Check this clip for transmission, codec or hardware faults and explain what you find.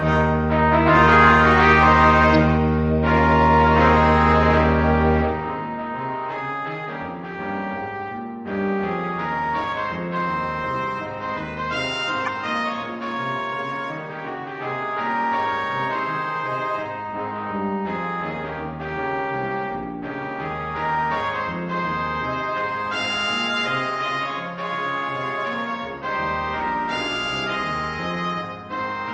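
Three faults, all of one kind: corrupt frame decoded, at 2.35 s, 12.25–12.29 s and 26.59–26.62 s. Each time, damaged compressed frames were played anyway, putting energy at wrong frequencies. The result is a short chirp or noise blip, loudest at 12.25 s.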